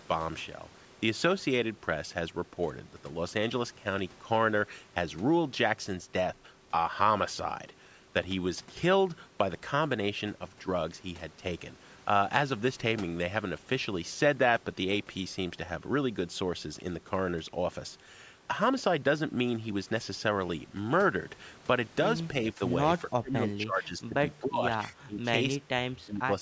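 Likely speech suppressed in double talk, with the echo canceller ducking this talker while the far side spoke: the speech dips by about 10 dB at 22.53–22.61 s and by about 20 dB at 22.99–24.15, 24.4–24.63, 24.9–25.2, 25.58–25.64 and 26.04–26.31 s.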